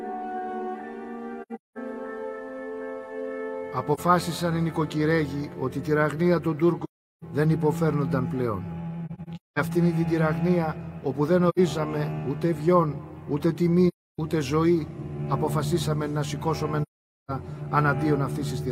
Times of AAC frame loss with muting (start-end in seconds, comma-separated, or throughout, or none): 1.42-1.78, 3.94-4.00, 6.84-7.24, 9.06-9.59, 11.49-11.59, 13.88-14.19, 16.82-17.31